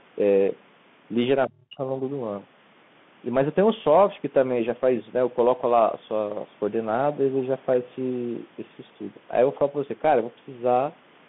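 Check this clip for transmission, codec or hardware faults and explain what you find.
Two faults are audible in the speech: a narrowband headset codec throughout, and a short suppression early on.

Throughout, the call passes through the Bluetooth CVSD headset codec, whose one-bit-per-sample delta coding at 64 kbps and 150 Hz to 3.5 kHz line band strip the top end. Its adaptive step lags fast transients, so sibilants turn scratchy over a granular hiss.

From 1.47 to 1.9 s the speech is suppressed in double talk, likely because the echo canceller could not separate the talker from the far side and attenuated both. The speech dips by up to about 35 dB for around 400 ms.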